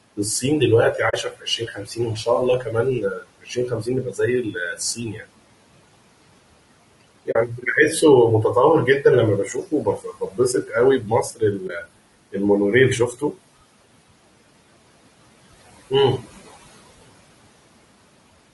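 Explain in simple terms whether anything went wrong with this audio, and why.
Several things went wrong, and they all come from the processing on the way from the microphone to you.

Throughout the clip, the background noise dips away in the pauses and creeps back in whenever someone talks. These are noise suppressor artifacts. A noise suppressor judges, moment by moment, which parts of the sound are steady background and turns those down. Here it pulls the room noise down a long way.

The speech itself also sounds rough and grainy, with an artificial, fizzy edge to the higher tones. This is most likely low-delay AAC compression, the kind of audio packing used for video calls. To keep the delay tiny, it works on very short slices of sound and has little data to spend. That smears the fine detail of the voice and leaves a gritty texture.

In several stretches, parts of the speech go faint or seem swallowed. 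Word endings and soft sounds fade into the background, and at times a whole quiet phrase sinks. This happens from 0.98 to 2.27 s, from 2.6 to 5.28 s, from 7.01 to 7.65 s, from 9.46 to 11.88 s and from 13.12 to 13.39 s. This is speech cut by the noise suppressor. It mistook quiet parts of the voice for background noise and turned them down along with the room noise.

Three times the sound briefly drops out. It fades to silence and back, leaving a small soft-edged hole. This happens from 1.09 to 1.14 s, from 7.31 to 7.36 s and from 11.67 to 11.70 s. This is AAC frame loss with muting. Small packets of audio went missing, and the decoder filled the gap with silence, blending smoothly in and out. The gaps last about 40 ms, 40 ms and 20 ms, which fits one or two lost 20 ms chunks each time.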